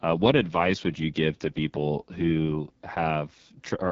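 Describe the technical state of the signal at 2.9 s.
At 2.9 s the speech carries AMR wideband (HD Voice) codec damage, present throughout. Its rough, raspy texture fits the lowest 6.6 kbit/s mode, where the pulse-driven vocal tract model is starved. Unlike narrowband coding, content extends to about 7.5 kHz.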